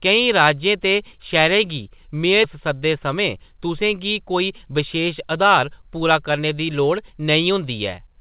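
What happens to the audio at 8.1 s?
Nothing goes wrong at 8.1 s: the speech carries on intact, still limited to the narrow band below 4 kHz that the G.711 mu-law call path gives it throughout.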